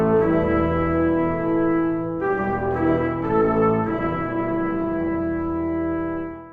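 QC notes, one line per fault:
3.39 to 5.23 s, time-stretched section: the music suddenly jumps to roughly 1.9 times its normal pace while the pitch stays put, so the passage feels rushed before snapping back at 5.23 s. That's most likely software squeezing this stretch to fit a shorter slot, holding pitch by cutting out tiny slices of the audio and butting the remainder together, which is where that hurried texture comes from.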